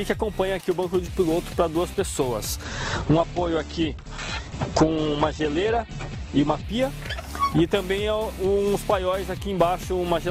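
From 2.64 s to 6.64 s the audio abruptly turns dull, with nothing above 8.2 kHz, then snaps back, with no gap at either edge. This is an adaptive stream at a lower bitrate, which fits a switch from roughly 64 to 12 kbit/s Opus.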